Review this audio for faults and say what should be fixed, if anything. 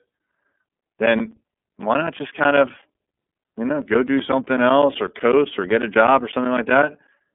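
The link ran the iLBC codec throughout, coding each 30 ms frame on its own, so the speech comes out rough and synthetic, with nothing above 3.7 kHz. Prevent this by negotiating a wideband codec for the call instead of narrowband iLBC.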